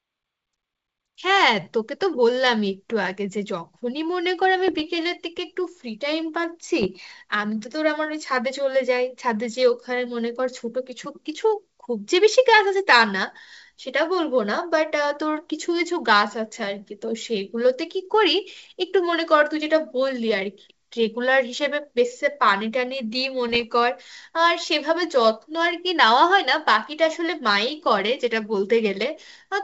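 Bit errors on an ADPCM link occur at 4.68 to 4.81 s, 6.82 to 6.88 s and 23.49 to 23.65 s. A small fraction of flipped bits, well under one percent, corrupts the coded differences. The decoder's step size and predictor go wrong and take milliseconds to settle. Each burst is heard as pops and gritty roughness with brief jumps in level, over a clear wideband G.722 channel.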